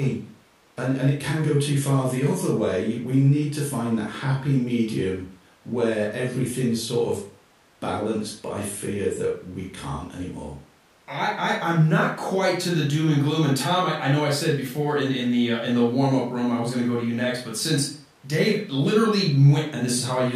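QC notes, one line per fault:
Nothing stood out on listening to the speech here, and there is nothing to flag.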